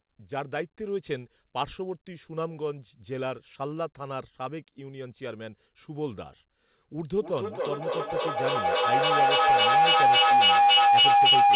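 At 7.18 s a feedback howl starts and runs to the end. Two devices in one room share the call. Each loop trip returns louder. It narrows to a tone near 700 Hz, with repeats roughly every 300 ms, and peaks about 12 dB above the speech.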